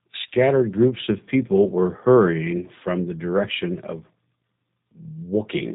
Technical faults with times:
0.00-5.75 G.729 codec

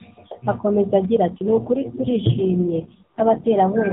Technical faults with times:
1.32-3.60 AMR rate drop

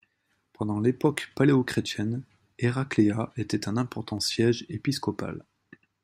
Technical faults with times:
1.26-5.64 clock drift buffer slips

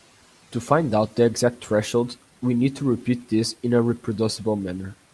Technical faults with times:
none

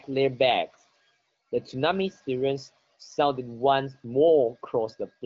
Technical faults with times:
none

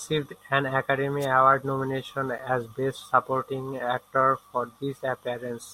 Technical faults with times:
1.21-1.26 wireless microphone noise hit

